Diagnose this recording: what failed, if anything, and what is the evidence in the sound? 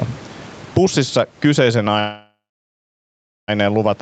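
Gain pumping is all through this speech, with the level swinging by around 15 dB. Loud and quiet passages sit unnaturally close together, and everything sounds squashed. That points at the capture stage, most likely input gain set far too hot, with a fast limiter or compressor in the call processing clamping down on each loud burst.

There's also a call audio freeze from 1.99 to 3.50 s. The last bit of sound carries on as a fading buzz or hiss and then drops out, leaving about 1.1 s of silence. After that the speech resumes right where it stopped, so nothing is lost and everything after it arrives about 1.49 s late. That's a network-stage problem: packets were likely held up in transit, the jitter buffer ran dry, and the receiver padded the wait until they showed up.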